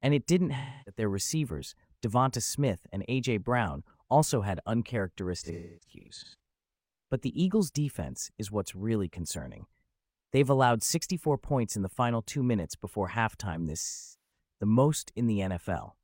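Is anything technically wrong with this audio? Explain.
Yes. There is AAC frame loss with concealment in this speech at three points. Lost frames are filled from the last good spectrum, giving a smeared, phasey patch rather than a clean dropout to silence:

0.57–1.01 s, after "it didn't": about 0.3 s lost.
5.37–6.35 s: about 0.64 s lost in scattered bursts, the longest run around 0.3 s.
13.82–14.38 s, after "minutes before halftime this": about 0.43 s lost.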